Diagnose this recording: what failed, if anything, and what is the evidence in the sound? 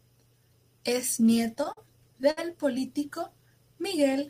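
Between 1.35 and 2.39 s the speech hitches and drags: eight brief stalls where the last sound is held and smeared forward, the longest about 61 ms, adding up to roughly 157 ms and around 15% of that stretch. Nothing audible is lost. These are repeated stalls (stutter) at the network and jitter-buffer stage: packets arrived late or too slowly, the buffer kept running dry, and the receiver stretched the previous sound until data resumed.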